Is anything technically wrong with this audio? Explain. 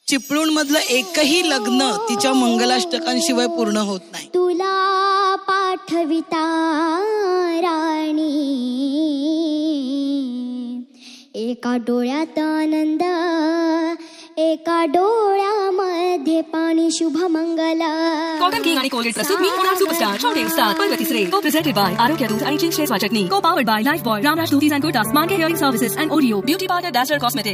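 No, nothing technically wrong stood out on listening to this audio.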